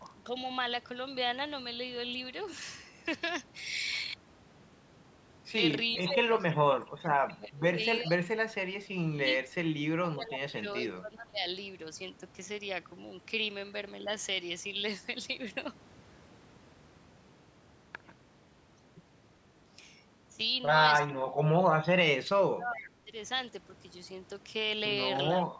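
Speech suppressed in double talk, at 5.95 to 9.26 s, 9.97 to 11.41 s and 21.08 to 23.13 s: the speech dips and breaks up in pieces, falling by roughly 25, 20 and 30 dB at worst, likely because an echo canceller confused the talker with loudspeaker echo and turned both down.

An echo leak, at 22.77 to 22.88 s: a brief, faint copy of the speech returns about 407 ms late, around 20 dB below it, likely loudspeaker sound the far end's echo canceller failed to remove before sending it back.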